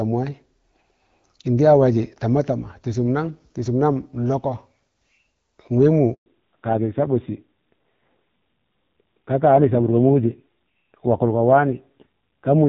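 A speech recording that suffers a handover gap and then a fallback to narrowband. The first half is clear HD Voice, with only light AMR wideband coding texture, which fits a 12.65 kbit/s rate. At 6.14 s the sound dies away and stays silent for 120 ms, until 6.26 s. The call was being moved to another network, and no speech frames arrived during the switch. Whatever was said in that gap is lost. From 6.26 s to the end, nothing above 4 kHz remains. The voice turns duller, thinner and rougher. The call has dropped from wideband to an older narrowband codec. Its coarse, raspy quality fits a low rate of about 5.9 kbit/s.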